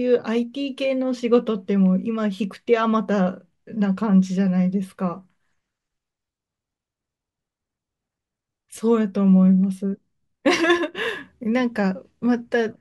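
No technical faults are audible.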